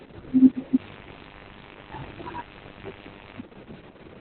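From start to finish the speech carries Opus voice compression at a heavy level. Nothing survives above about 4.3 kHz, the narrowband limit of the SILK linear-prediction coder, and the excitation is so coarsely coded that the voice turns hoarse, buzzy and faintly robotic. That rasp is what sets it apart from a plain low-pass filter, which would only muffle. The damage points to a rate near 6 kbps with long 60 ms frames.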